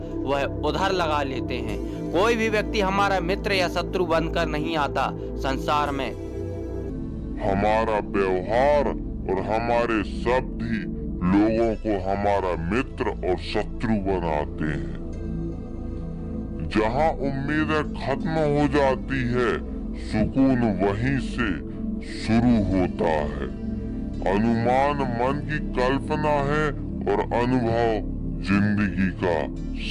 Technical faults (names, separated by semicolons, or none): wrong sample rate